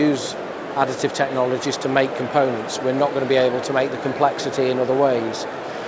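No faults are audible anywhere in the recording.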